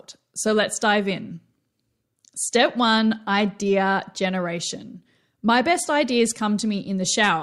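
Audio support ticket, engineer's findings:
No audible faults in this speech recording. Nothing found on listening that would point to a failing component in the chain.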